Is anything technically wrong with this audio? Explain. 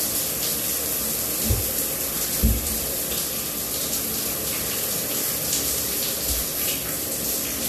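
No, nothing technically wrong can be heard in this audio.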